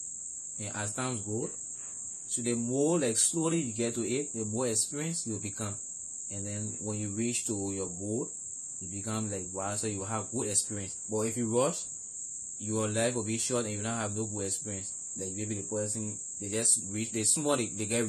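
It's a speech recording, and across the whole thing there's plainly audible codec damage, most likely AAC compression. Nothing comes through above 13.5 kHz, so the top end sounds dull, and sibilants pick up a fizzy, warbly smear where the encoder ran short of bits and coarsely quantised or patched over parts of the spectrum. That level of damage fits a low AAC-LC bitrate, somewhere around 32 kbps.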